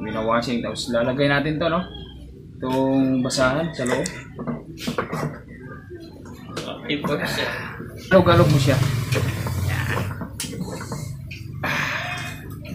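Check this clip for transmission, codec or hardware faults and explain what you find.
One fault is audible, a stream segment skipped. At 8.11 s the sound jumps abruptly ahead with a short blip. The likely cause is a failed segment load, with the player moving straight on to the next one and losing that stretch of the programme.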